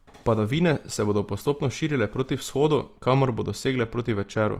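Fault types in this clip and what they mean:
Opus compression: The speech sounds plainly grainy and rough, with a noisy fizz where clean detail should be, but the top end stays full rather than muffled. That's likely Opus in its CELT music mode padding starved bands with folded or noise energy, consistent with roughly 24 kbps.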